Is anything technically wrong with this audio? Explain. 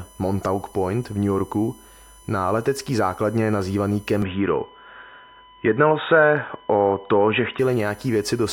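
Yes, there are two faults.

USB whine runs through the whole clip. A USB device's bus activity, which draws current in regular 1 ms frames, is leaking into the audio through the shared power or ground, leaving a fixed-pitch tone at 1 kHz with a series of harmonics. The strongest of these sits at 10 kHz, so the whine reads as a thin, high, steady whistle, around 30 dB below the speech.

From 4.22 s to 7.59 s the sound abruptly changes character. The likely cause is an input switched to a poorer device, with the system moving the recording to a lower-grade microphone or headset path and then back. During that stretch nothing reaches above 3.8 kHz, so the speech turns dull and boxy and loses its crisp consonants. The level shifts by a few dB, and a new noise floor sits roughly 50 dB under the speech. There is no gap at either switch.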